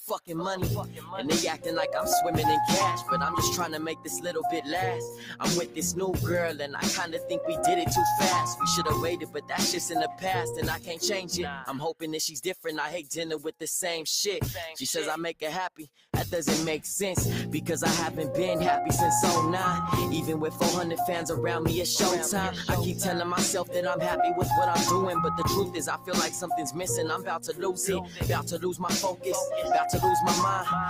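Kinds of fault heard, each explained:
Noise suppressor applied to music or sounds: Throughout the clip, a speech-oriented noise suppressor is treating steady sound as if it were background noise. It keeps estimating noise and pulling down whatever holds steady, so level swings by around 5 dB as sustained parts and decays are turned down while sharper onsets pass. The result is an unsteady, pumping quality, with held sound thinning and tails sinking instead of fading naturally.
Sound cut by the noise suppressor: At 0.84, 5.11, 9.19, 10.77, 12.36, 15.76, 27.46 and 28.03 s, short stretches of a few tenths of a second or less are misjudged as noise and sharply attenuated. The drops reach about 8 to 11 dB, deepest near 9.2 and 15.8 s. Because the suppressor targets what sounds stationary or decaying, these moments sink audibly against the surrounding material, as brief dips or clipped-off tails.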